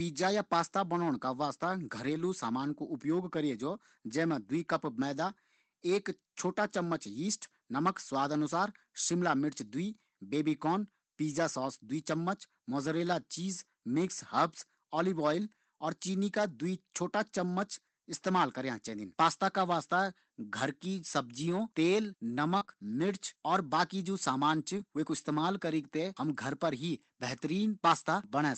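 At 2.05 to 2.19 s, between "का वास्ता" and "सामान कु उपयोग", there is a lost packet rebuilt from error correction. About 80 ms went missing, which fits four separate lost packets, but the following packets carried low-bitrate copies and the decoder played those instead. The sound never drops out or stalls. It just turns briefly coarser and grainier, with the same timing and movement as the real audio, and then snaps back to normal coding quality.

Around 22.57 to 22.70 s the damage is mixed. At 22.57 to 22.63 s comes short concealed packet loss: about 34 ms is filled by stretching the preceding sound forward, heard as a short smear or wobble. A 20 ms stretch at 22.61 to 22.63 s is rebuilt from error correction within that span. A second concealed loss at 22.65 to 22.70 s fills about 28 ms the same way. Unlike the rebuilt segments, concealment does not follow what was actually said. It carries on the last sound's pitch or noise, so a brief consonant can vanish.

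At 24.78 to 24.80 s, another single 20 ms packet is rebuilt from error correction, a moment of roughness with no gap.

Throughout, the Opus call path at 24 kbps limits the audio to about 8 kHz.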